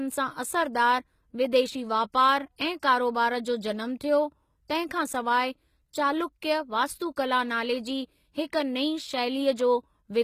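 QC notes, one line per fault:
throughout: HE-AAC compression. The s sounds come out gritty and lispy, and the treble is synthetic, with nothing above 14.9 kHz. The likely cause is treble rebuilt by copying lower bands upward, which fits a low bitrate around 20 kbps.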